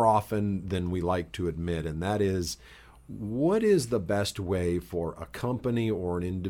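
Nothing stood out on listening to this speech recording.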